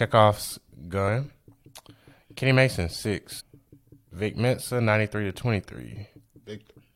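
Speech, with two short blips from damaged data in a compressed stream, at 1.07 s and 3.39 to 3.41 s, where corrupted frames knock the decoder out of sync.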